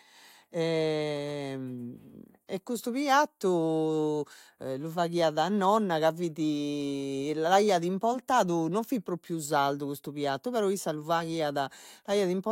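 No technical faults can be heard anywhere in the recording.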